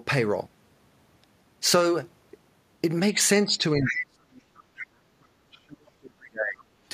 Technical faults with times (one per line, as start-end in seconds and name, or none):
3.45-6.64 speech suppressed in double talk
3.85-3.93 other side's voice leaking through